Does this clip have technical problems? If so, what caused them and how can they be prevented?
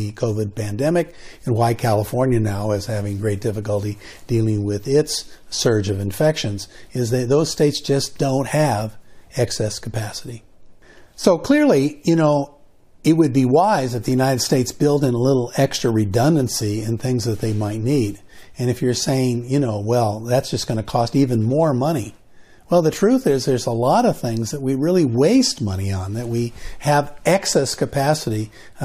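No, nothing stood out as a technical problem on listening to this clip, so there is no cause to trace or prevention to suggest.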